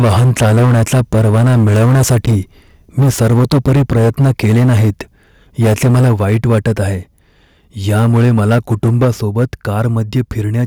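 Speech with harsh, crackling flattened peaks in six stretches: 0–2.37 s, 2.98–4.9 s, 5.61–6.83 s, 7.88–9.45 s, 9.79–10.33 s and 10.59–10.62 s. The excess eases from about 12 dB to about 1 dB over the clip, likely microphone overload from an input volume set too high. Abrupt level drops of about 2 to 3 dB at 0.02, 3.03, 6.04 and 9.05 s are likely microphone volume stepped down, with the call software cutting input gain in single steps.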